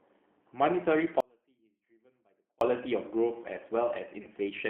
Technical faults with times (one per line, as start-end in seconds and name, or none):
0.00-4.70 G.729 codec
1.20-2.61 audio dropout to a faint residue
4.23-4.28 VoIP packet loss concealed by the speech codec